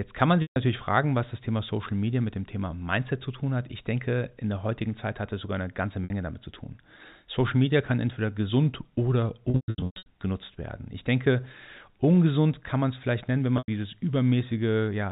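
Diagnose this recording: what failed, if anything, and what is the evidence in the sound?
Packet loss with pitch repetition, a network fault, at 0.42, 6.04, 9.5 to 10.06 and 13.58 s. After "kann man" and "kann entweder gesund oder", the receiver loops the last pitch period into a held buzz; longer gaps fade toward silence before cross-fading back.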